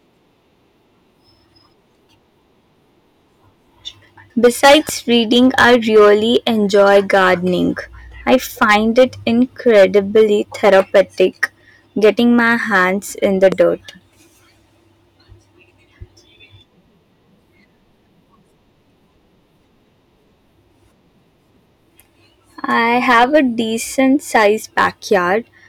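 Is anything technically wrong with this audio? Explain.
Yes. Throughout the speech, the signal is driven about 12 dB past what a stage in the chain can pass, so a small share of peaks are cut flat. This hard clipping adds high harmonics, heard as crackly distortion on louder syllables.

At 4.65 to 4.91 s, a loud pop occurs twice, likely from a sudden voltage step such as a plug, switch or static discharge. Each pulse sits well above the speech, which carries on underneath.

At 13.52 to 13.54 s, a single loud pop of the same likely electrical origin produces a sharp, brief click standing well above the speech.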